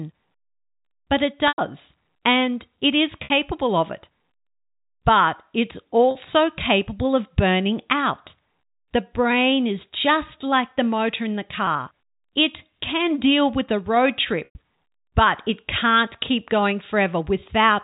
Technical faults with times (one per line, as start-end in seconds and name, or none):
1.48-1.58 packet loss with pitch repetition
3.24-3.30 packet loss with pitch repetition
6.11-6.15 packet loss with pitch repetition
11.66 packet loss with pitch repetition
14.45-14.55 packet loss with pitch repetition